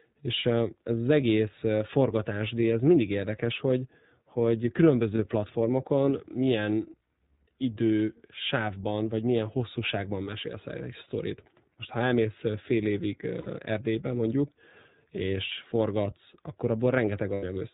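Speech passed through the iLBC codec, which cuts everything above 4 kHz and leaves a plainly rough, synthetic edge, consistent with its 30 ms frame mode at roughly 13 kbps. Lost iLBC frames appear as brief held, buzzy vowel fills at 0.41–0.45 s just before "ez az egész forgatásdíj", at 5.15–5.19 s after "mindig érdekes hogy hogy", at 13.41–13.48 s, and at 17.34–17.44 s. In each case the decoder repeats the last pitch cycle with noise for the missing 30 to 90 ms and recovers immediately.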